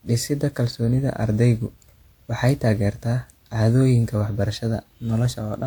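Repeated lossy re-encoding, likely about three passes through a WMA codec at a rate consistent with 128 kbit/s, causes generation loss across the whole speech clip. Each decode and re-encode quantises the signal again on a shifted frame grid, so noise accumulates instead of cancelling. The result sounds swirly and hollow, more smeared than that bitrate alone would produce, with softened consonant attacks and nothing above about 20.1 kHz.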